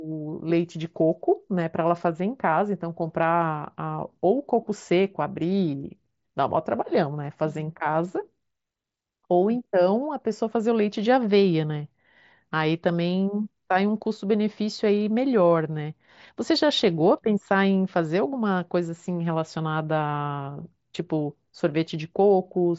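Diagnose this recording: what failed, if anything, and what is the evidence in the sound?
Nothing failed: the speech comes through a Bluetooth mSBC headset link working as designed, with its band ending at about 7.7 kHz.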